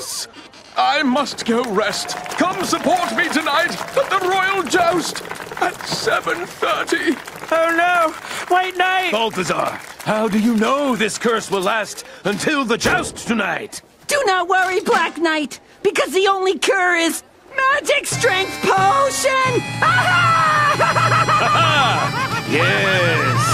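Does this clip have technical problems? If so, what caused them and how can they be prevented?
No, nothing in this one trips any technical alarm, so there's no cause to track down and nothing that needs preventing.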